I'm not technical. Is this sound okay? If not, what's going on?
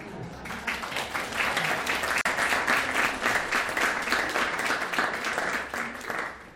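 No. At 2.21 s there's a gap at a join of encoded pieces: about 43 ms of silence where two separately saved parts meet. Unlike a dropout, nothing is lost; the sound resumes exactly where it stopped.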